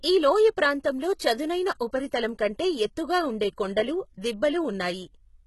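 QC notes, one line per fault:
Throughout, HE-AAC compression: the speech was likely coded with HE-AAC at a very low rate, fitting roughly 16 kbps. Only the lower spectrum is carried directly, and the treble is synthesized by copying lower bands upward under a coarse envelope. The top end therefore is not the original, and its harmonics fail to line up across the crossover. Codec damage is heavy, and nothing remains above 11.8 kHz.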